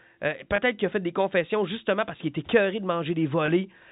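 Telephone-band speech with packet loss with pitch repetition at 0.56–0.58 s, just before "qu'il a fait des", and at 3.46–3.48 s. Each gap, consistent with a single lost 20 ms packet, is bridged by a briefly held, buzzy repeat rather than the hard silence of a plain dropout.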